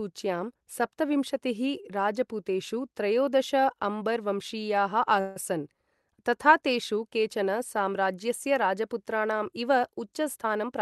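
Speech over what sounds like an Opus call, with high end stopping around 12 kHz. Right after "राजपूतेषु त्रयोदश अम्बर् वंशीयाः", 5.20 to 5.37 s has a call audio freeze: the last sound hangs as a fading buzz for about 156 ms, then speech resumes where it stopped with nothing lost. It's now running that much later. The likely cause is delayed packets draining the jitter buffer. Then from 10.36 to 10.80 s there's a jitter buffer speed-up. The receiver trims tiny pitch-period slices to shed backlog, roughly 70 ms in total, so delivery runs about 115% speed at unchanged pitch and sounds rushed.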